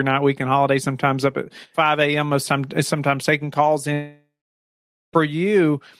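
At 3.93 s the speech turns into a buzzy smear of the last sound fading out, then about 0.85 s of silence until it resumes at 5.15 s with roughly 1.2 s gone. That's likely a long network dropout, with the receiver padding the gap.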